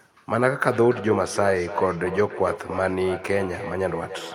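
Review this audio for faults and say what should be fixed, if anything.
From 0.7 s to 4.3 s there is feedback echo between two devices. A nearby device replays the call, this microphone picks it up again, and its own echo canceller can't remove it. Repeats come about every 0.3 s, peak about 11 dB below the speech, and grow thinner and more ringing, unlike the smooth decay of room reverb. To prevent it, mute the microphone and speaker on all but one device in the room, or have each participant use headphones.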